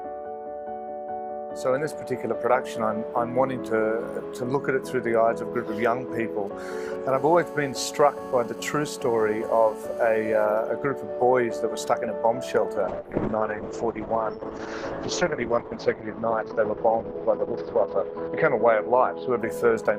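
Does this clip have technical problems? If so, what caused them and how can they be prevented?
Yes. From 6.47 to 7.11 s there are GSM signalling bursts: a galloping pattern of ticks and brief 217 Hz buzzes, roughly 35 dB below the sound. A nearby 2G phone's short radio bursts are rectified by the audio circuit. A spectrogram shows clustered vertical ticks with comb harmonics. Keep phones away from the recording chain.

From 7.17 to 10.45 s a GSM phone buzz follows, a steady raspy 217 Hz tone with many harmonics at about 32 dB below the signal, as the phone transmits in bursts 217 times a second during a call. It appears as evenly spaced horizontal harmonic lines. Switch phones to airplane mode or use shielded, balanced cabling.

From 12.9 s to the end a call bitrate drop sets in. A falling bandwidth estimate pushed the Opus encoder from 48 kbps down to 7 kbps, which it held for about 5 s, and the audio band narrowed from 20 kHz to 6 kHz, so the sound turns muffled and watery. 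A spectrogram shows everything above 6 kHz abruptly cut off. Provide more stable network bandwidth or set a higher minimum bitrate.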